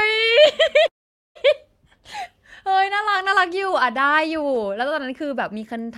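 A call audio freeze runs from 0.87 to 1.37 s. The speech stops moving forward: the last sound is carried on briefly as a fading buzz, then drops to near silence for about 0.45 s before the speech picks up exactly where it stopped. The likely cause is packets held up in transit until the jitter buffer ran dry, so the receiver filled roughly half a second. Nothing is lost, but everything afterwards plays about 0.48 s late.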